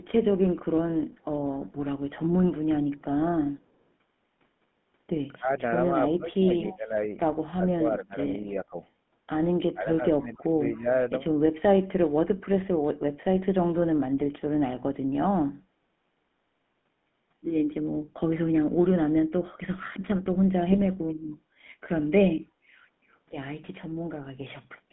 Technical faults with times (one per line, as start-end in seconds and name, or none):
0.00-24.92 GSM full-rate codec
5.38-5.50 speech suppressed in double talk
5.91-6.95 speech suppressed in double talk
6.66-6.76 echo leak
8.26-8.29 GSM bit errors
9.73-10.87 speech suppressed in double talk
20.72-20.82 GSM bit errors